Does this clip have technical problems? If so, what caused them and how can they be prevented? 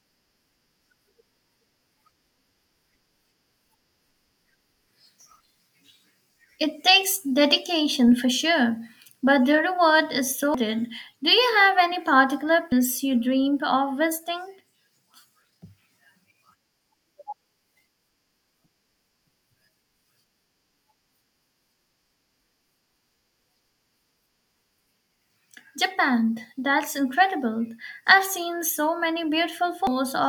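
Yes, there's damaged data in the compressed stream: three short blips at 10.54–10.58, 12.72–12.75 and 29.87–29.90 s, each 32 ms. Corrupt bytes make the decoder misread frames and lose sync until it finds the next header. Checksummed transfers and verified storage would prevent it.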